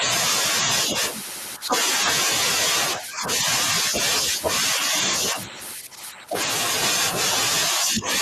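The speech dips at 1.58–1.74 s, 2.98–3.46 s, 5.32–5.58 s, 5.75–6.35 s and 7.71–8.07 s, mostly by roughly 10 dB, less near 5.3 s. This is likely speech suppressed in double talk: the echo canceller couldn't separate talker from loudspeaker echo and attenuated both.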